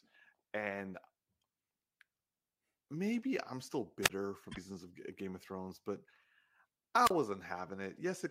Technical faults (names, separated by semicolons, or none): wireless microphone squelch dropout; damaged data in a compressed stream